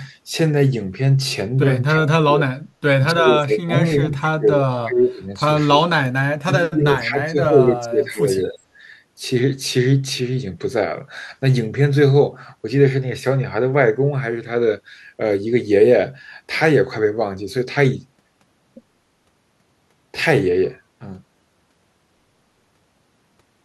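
Right at 1.91 s the speech sinks by roughly 35 dB for under half a second. That's likely speech suppressed in double talk, with the canceller turning the talker down while the far end talks over them. At 2.71 s the background is gated by the echo canceller, and the room sound drops about 21 dB for a tenth of a second. The speech dips return at 3.12, 3.9, 5.75, 6.39 and 8.49 s, about 20 to 25 dB down, with the longest lasting around a second and a half.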